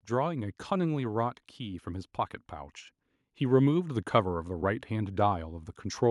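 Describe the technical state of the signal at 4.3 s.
At 4.3 s the signal is in the middle of an automatic gain rising event that runs from 0.34 s to 5.75 s. The automatic gain control has judged the incoming level too low and is steadily pushing its gain upward, by about 7 dB over that whole span. Because the boost acts on the entire input, the speech and the background noise floor swell together, producing a slow, continuous level climb.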